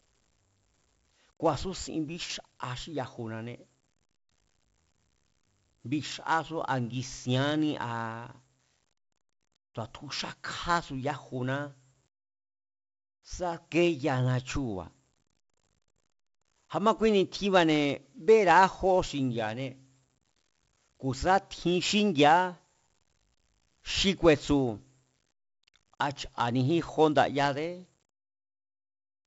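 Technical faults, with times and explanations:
Throughout: 4-bit ADPCM compression. Each sample of the speech is coded as a coarse 4-bit step from a predicted value, and the step size adapts as the signal changes. The result is heavy codec damage: a gritty hiss that rises and falls with the level of the speech, and roughness on sharp onsets where the step cannot keep up. The bitrate of 64 kbps fits a 16 kHz sample rate, and nothing is present above 7.7 kHz, which dulls the top end.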